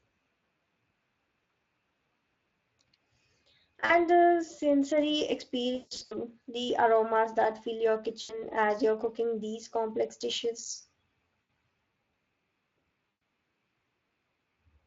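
Speex codec damage is plainly audible across the whole clip: at a bitrate near 21 kbps the CELP coder has too few bits for the excitation, so the speech sounds noisy and hoarse.

VoIP packet loss concealed by the speech codec occurs at 1.45, 3.85 (just before "the sensory"), 5.75–6.16 (right after "the sensory", gaps totalling 260 ms, longest 160 ms), 8.21–8.45 (between "aromas that fill your" and "as you're cooking these"), 11.41 and 13.09–13.21 s. The decoder extrapolated the last pitch and filter, producing a fading buzz or coloured noise, and weak audio persisted afterward.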